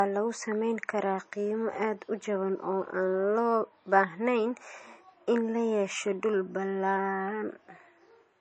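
Low-bitrate audio saved at a high bitrate runs throughout this speech clip: nothing above 8.3 kHz, likely from an earlier low-rate MP3 encode that re-encoding cannot restore.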